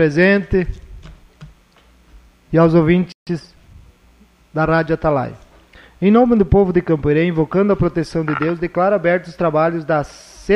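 At 3.12 s the sound just drops out mid-flow and stays silent until 3.27 s, a gap of about 146 ms. That's a playback stall: the output had nothing to play for that stretch, most likely because the player's buffer ran dry or its audio thread got held up and couldn't deliver samples in time.

Straight after that, from 3.27 s to 3.85 s, you get time-compressed catch-up. Having fallen behind, the player claws back the backlog by snipping out tiny slices and cross-fading over the joins, so the audio runs at about 1.25 times normal speed. Pitch stays put, so it doesn't sound chipmunky, just rushed.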